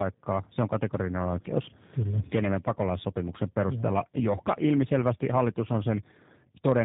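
Tandem speech coding runs through the whole clip. The speech went through two low-rate speech coders in a row, consistent with GSM full rate then G.729A. The second coder re-encoded an already damaged signal. It sounds rough, muffled and warbly, with nothing above 3.8 kHz.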